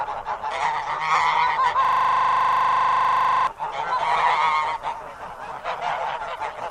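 At 1.85 s the audio locks into a system hang loop that lasts until 3.47 s. A single 40 ms slice of sound repeats exactly, roughly forty times in a row, because the host or driver stalled while the playback hardware kept cycling the same ring buffer contents. At a loop rate of 25 Hz the repetition is heard as a coarse, rattling buzz with a fixed pitch-like pulse. Normal audio resumes abruptly at 3.47 s.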